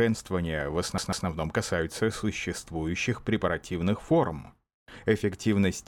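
Just under a second in, at 0.98 s, the speech gets stuck like a CD on one turn. A scratch is throwing the pickup back to the same spot, so a chunk of about 145 ms plays twice in a row, with a brief mute at each jump. It runs to 1.27 s as a quick, even stutter, then clears and the speech picks up with "касаются существующих препаративных форм".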